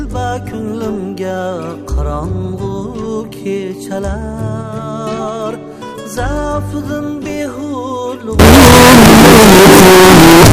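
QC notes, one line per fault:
8.39–10.52 s: signed and unsigned mixed up. The audio abruptly turns into very loud, harsh distortion to the end, with quiet material as loud as the rest. The likely cause is 16-bit samples read with the wrong sign convention, so every zero crossing swings across the full range.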